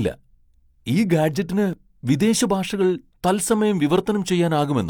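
At 1.73 s the speech jumps abruptly forward, with roughly 15 ms of sound missing and no gap of silence. This is likely a dropped buffer (overrun): the samples were overwritten before being read, so the sides of the loss were spliced together directly.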